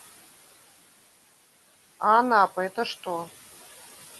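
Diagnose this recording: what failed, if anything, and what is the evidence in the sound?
The failure is in the call processing: noise suppressor artifacts run through the whole speech clip. The room noise, sitting about 17 dB under the voice, drops by about 15 dB in the gaps and swells back under each phrase, because the suppressor is gating the bands it reads as steady noise frame by frame.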